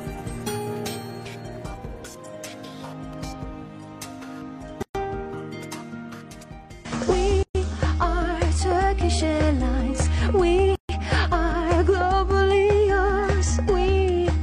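At 4.82, 7.43 and 10.75 s, silences of 124, 121 and 138 ms cut into the sound: gaps at joins of encoded pieces, left by untrimmed encoder delay and end padding. Unlike a dropout, nothing is lost; the sound resumes exactly where it stopped, edges smeared.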